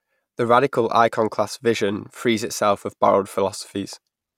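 Nothing in this bit of speech stands out as a technical fault; it just runs its course without any trouble worth pointing to.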